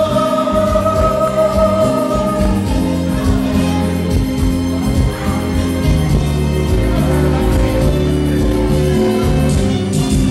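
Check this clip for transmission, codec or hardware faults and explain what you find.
Four sharp clicks point to likely dropped samples, at 1.28, 3.44, 4.81 and 8.71 s. At each one, a fraction of a millisecond of the stream goes missing. The waveform leaps straight to a later value, producing a single brief click with no audible gap in the sound.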